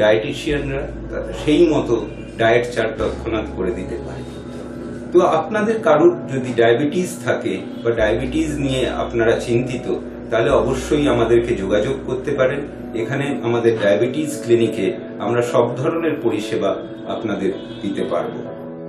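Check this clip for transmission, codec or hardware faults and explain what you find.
Nothing faulty turns up anywhere in this recording.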